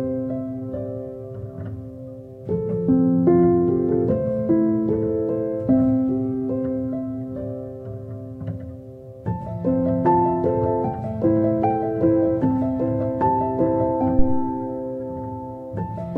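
At 14.19 s a supply step, most plausibly phantom power being switched on a live input, passes through the coupling capacitors and produces a phantom power thump: a deep low-frequency thud peaking at about -6 dBFS, decaying over 86 ms and fading by 14.57 s.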